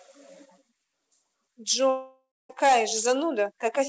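At 1.90 s the speech cuts out until 2.51 s. The sound is likely a long network dropout. About 0.6 s of audio never arrives. The receiver stretches the last sound into a fading buzz, then about 0.23 s of near-silence. Audio returns with that stretch missing. Throughout, nothing sounds above 8 kHz, which fits a G.722 call codec.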